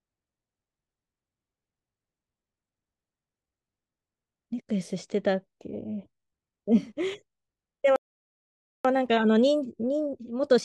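At 7.96 s the speech cuts out in mid-flow. Silence holds until 8.85 s, a gap of about 0.89 s. This is a playback stall. The player likely ran short of data, or its output thread was held up, so nothing reached the output. When sound returns, it resumes where it broke off. No content is lost across the gap.

From 8.85 s to the end, a time-compressed catch-up follows. The player is working off the backlog built up during the stall. It trims small slices from the audio and cross-fades the joins. The speech runs at 1.25 times normal speed, yet its pitch stays the same. The delivery sounds hurried.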